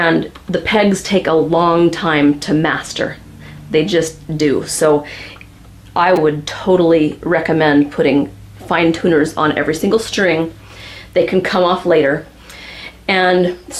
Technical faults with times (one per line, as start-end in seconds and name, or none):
6.16 repeated buffer